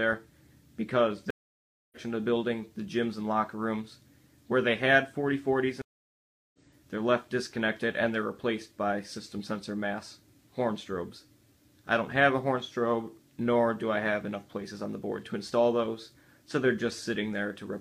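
Stream reconnects at 1.30 s and 5.82 s: the connection drops, the waveform flatlines for 0.61 s and 0.72 s, and the sound resumes roughly 0.7 s and 0.5 s further along.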